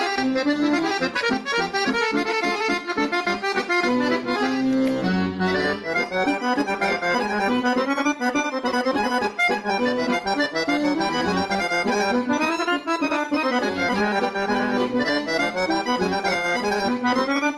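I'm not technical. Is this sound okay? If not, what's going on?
No. Throughout the recording the sound is squashed, with loud and soft parts pushed closer together in level. That's gain pumping, likely from the microphone level being set far too high.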